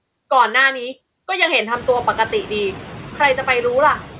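Throughout the speech, a noise suppressor is working against the room noise, cutting it by only about 7 dB frame by frame. Once that noise rises sharply at around 1.5 s, to roughly 18 dB below the speech, the suppressor lets the residue swell under each phrase and sink in the gaps. The voice stays within the narrowband range, where nothing reaches above 4 kHz.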